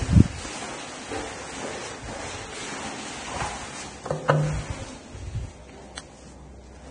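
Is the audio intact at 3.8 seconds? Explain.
No. At 3.8 seconds, as throughout the clip, there is heavy damage that points to Vorbis compression, likely at a low bitrate around 24 kbps. The encoder keeps only a smooth outline of the spectrum and codes the detail above it so coarsely that fine treble turns into noise of similar energy, and nothing survives above 9.7 kHz. The sound is dull at the top yet hissy and grainy, with roughened tones and smeared attacks.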